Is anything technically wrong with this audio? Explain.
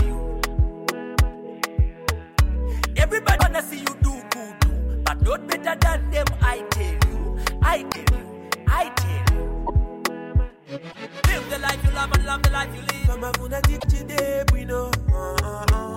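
Yes. At 3.37–3.42, 7.91–7.96, 9.66–9.70, 10.91–10.96 and 13.79–13.84 s the audio jumps ahead with a garbled 40–50 ms glitch, likely a broken MP3 bit reservoir: after dropped 24 ms frames, the next ones decode from the wrong bytes.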